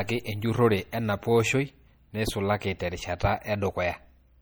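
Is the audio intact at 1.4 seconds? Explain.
No. At 1.4 seconds, as throughout the speech, the sound shows the swirly, watery smearing of likely MP3 compression: weak frequency lines flicker between frames as the encoder starves them of bits, consistent with a low bitrate near 48 kbps.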